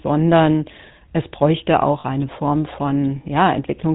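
Throughout the clip, the GSM full-rate codec rebuilds the speech from a vocal-tract model fed by sparse pulses and discards everything above 4 kHz, which fits 13 kbps coding. This leaves a plainly audible buzzy, gravelly roughness.

From 2.0 to 2.05 s, just after "es bräuchte", lost GSM frames are patched by repeating the last good frame's settings. The 40 ms gap, which points to two missing frames, becomes a brief rough, metallic ring.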